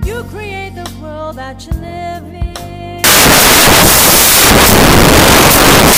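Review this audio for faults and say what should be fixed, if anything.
From 3.04 s to the end, the audio turns into samples built from the wrong bytes. The reader misassembles each sample: off by a byte, with the byte order swapped, or with the wrong alignment. The fast-changing low bits then dominate each value, giving broadband noise. To prevent it, check that the decoder's byte order, sample width and frame alignment match the stream's format before reading.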